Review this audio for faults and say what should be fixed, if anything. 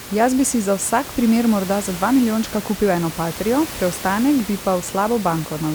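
Nothing here needs fixing: the only thing to notice is a bit of background noise from the room, sitting about 14 dB under the speech, and that's just part of the recording rather than anything the system did.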